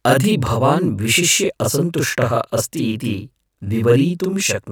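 From start to finish, the speech carries a channel delay, heard as doubling. One channel runs about 40 ms behind the other. When the two are folded to mono, the late copy does not blend in. It arrives as a separate, equal-level repeat of every syllable. The result is a thickened, slapped sound, like two voices speaking almost together. Consonants smear into short double hits. The fault holds steady for the whole clip.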